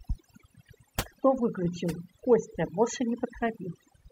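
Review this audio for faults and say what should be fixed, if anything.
Overdone noise removal runs through the whole speech clip. The background drops and breaks up into twinkling, warbling specks. Quieter parts of the voice sit near the tool's noise estimate, so those bands are cut too. Set the reduction gentler and check it by ear.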